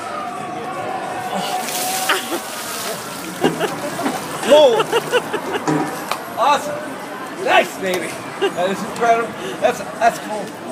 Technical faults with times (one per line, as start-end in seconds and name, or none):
none